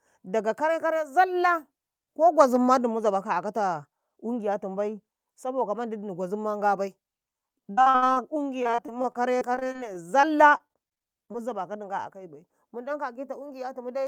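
Repeated packet loss (robotic sound) hits 7.71–8.21 s and 8.63–11.44 s: recurring holes patched by stretching the last sound, giving choppy sound with pieces missing rather than one clean dropout.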